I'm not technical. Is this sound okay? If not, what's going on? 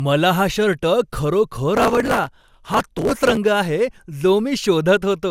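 No. The computer fell behind from about 1.77 to 3.37 seconds, skipping many tiny slices of speech, which causes processor overload crackle, a gritty tearing over the voice. Throughout, the speech was likely re-compressed about seven times over, which causes generation loss, leaving it swirly, hollow and smeared, with blurred word starts.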